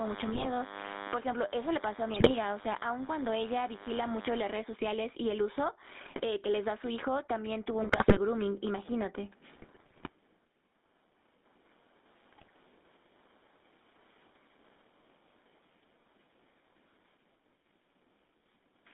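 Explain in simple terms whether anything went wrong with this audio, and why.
Several things went wrong, and they stack on top of each other.

The microphone level was likely set far too high, with an automatic limiter constantly pulling it back down. That causes gain pumping throughout the recording: the level swings by a large amount as the limiter clamps down on loud sounds. Loud and quiet moments end up at nearly the same level, so the whole recording sounds squashed and breathing.

The call also went through the old GSM full-rate codec for its whole length. This phone system doesn't send the actual sound wave. It sends a rough model of the speaker's throat and mouth, driven by a simplified train of pulses. Only a narrow band, roughly 200 Hz to 3.7 kHz, gets through. The result is thin, muffled speech with a clearly audible buzzy, gravelly roughness.

On top of that, the radio link was weak at six moments, and scrambled data reached the decoder. 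These GSM bit errors come at 0.32–0.48 s, 2.14–2.31 s, 6.06–6.21 s, 7.82–8.19 s, 9.54–10.09 s and 12.32–12.51 s. Each time, the decoder rebuilds the voice from corrupted settings, so the speech breaks into squawks, pops and gargling. The longest bursts are the ones near 8 s and 10 s, and the one near 8 s is the most heavily corrupted.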